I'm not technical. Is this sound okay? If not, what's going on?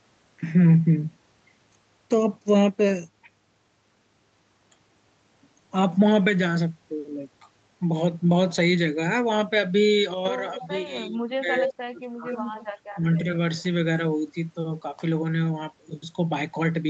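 No. Around 10.55 to 10.62, 11.09 to 11.48, 11.77 to 12.31 and 12.93 to 13.08 seconds, the speech suddenly dips or partly drops out. This is speech suppressed in double talk, likely because both sides spoke at once and the call's echo removal turned everything down.

At 10.6 to 10.68, 11.55 to 11.74, 12.32 to 12.67 and 13.58 to 13.62 seconds, a delayed copy of the speech trails about a quarter second behind. This echo leak likely comes from a loudspeaker whose sound got back into the microphone and wasn't fully removed.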